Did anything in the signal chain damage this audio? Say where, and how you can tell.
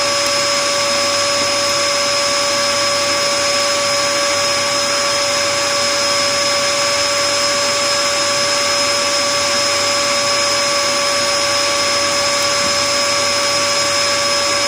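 Yes. A digital link read on an unsynchronised clock, off by roughly 200 ppm, slips one sample about every 0.1 s, producing steady word clock ticks from 0.15 to 14.57 s.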